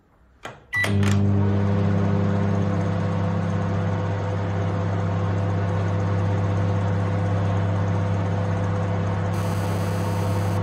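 A recording of sounds, with GSM phone buzz from 9.34 s to 10.58 s, about 17 dB below the sound itself. A nearby 2G handset on a call was transmitting in bursts at 216.7 Hz, and the audio circuitry rectified those radio pulses into a hard, raspy buzz packed with harmonics. It stays nearly steady, as a call does. Mains hum sits at 50 or 60 Hz and sounds smooth, whereas this is harsher, pitched at 217 Hz, and bears no relation to the sound.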